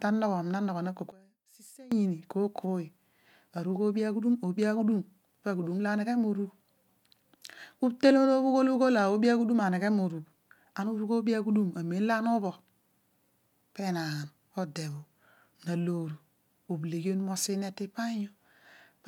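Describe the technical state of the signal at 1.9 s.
At 1.9 s the signal is in the last moments of a drop in level of about 23 dB that runs from 1.12 to 1.92 s. The centred speech and its low end collapse, leaving only a faint residue. The likely cause is one channel inverted: one stereo channel has reversed polarity, so the content shared by both channels cancels on a mono sum and only their small difference survives until the polarity returns at 1.92 s.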